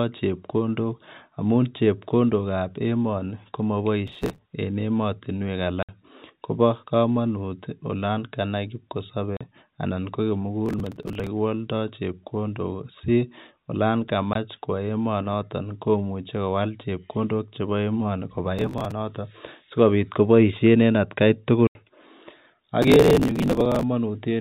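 At 4.08 to 4.38 s a burst of processor overload crackle appears: a gritty tearing laid over the speech. The processor is falling behind on very small buffers, a few milliseconds each, and each late one is skipped outright, so the audio jumps forward with a hard edge dozens of times in quick succession. The same crackle returns at 10.66 to 11.27 s and 18.59 to 18.92 s, then at its longest at 22.82 to 23.83 s. Each burst stops cleanly once the load eases.

Packet loss filled with silence cuts dead holes into the speech, each with hard edges where the signal drops abruptly to silence and returns. They fall at 5.83 to 5.89 s (60 ms), 9.37 to 9.41 s (40 ms), 14.33 to 14.35 s (20 ms) and 21.67 to 21.75 s (80 ms). Every gap is a whole multiple of 20 ms, which points to 20 ms packets, with the receiver inserting silence rather than concealment. The gaps stand out against the narrow, telephone-band sound of the G.711 line.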